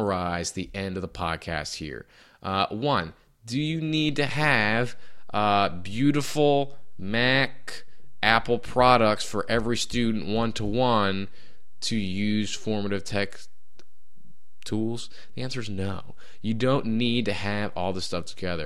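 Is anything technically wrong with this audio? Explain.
Yes, there is one fault. At 4.09 s, just after "one do you", a DC step moves the waveform's zero line by about -30 dBFS, and the offset holds until the end. The sudden shift in the signal's baseline is heard as a single low thump or click while the speech continues unchanged. On a waveform, the trace sits displaced from centre from that point on. A spectrogram shows a brief low-frequency mark at the step.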